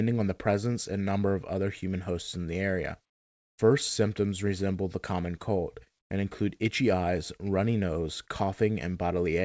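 Discontinuous transmission likely dropped the real background from 3.10 to 3.58 s, just after "hosts in the area." The receiver then substituted comfort noise in place of the background, a flat, featureless hiss about 23 dB quieter, on a path carrying nothing above 8 kHz.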